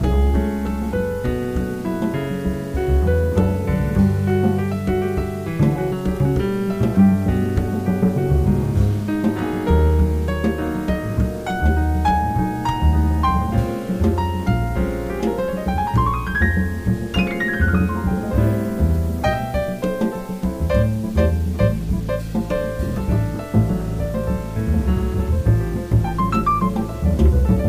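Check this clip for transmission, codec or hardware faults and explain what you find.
There's one fault, and it runs the whole way through. It's low bit depth without dither: grainy distortion that tracks the signal, noise sitting only about 30 dB down, likely from rounding to around 7 bits with no dither.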